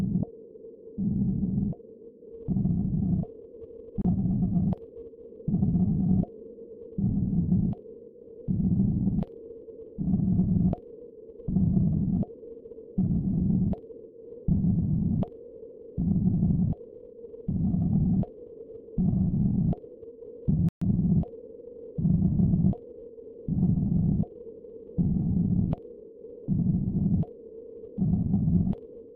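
At 4.02 to 4.05 s and again at 20.69 to 20.82 s, digital broadcast dropout mutes these everyday sounds. The receiver silences failed frames, which fits 32 ms frames. Unlike concealed packet loss, there is no smearing or repetition, just clean holes.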